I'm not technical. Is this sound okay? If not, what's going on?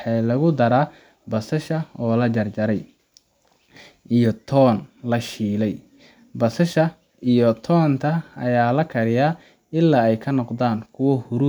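Yes, this one's fine: nothing in the recording jumps out as a technical problem, so you can relax about it.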